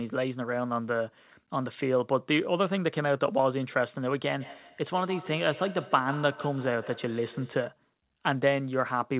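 From 4.4 s to 7.72 s the speech picks up a feedback echo between two devices. A second device in the same room is playing this call aloud, and this microphone hears it again. The echo canceller only removes its own device's output, so the sound loops back. Each syllable returns about every 150 ms. The repeats peak at about 16 dB below the speech. They sound thin and ringing, within a band that stops near 4 kHz, which fits a G.711 call codec.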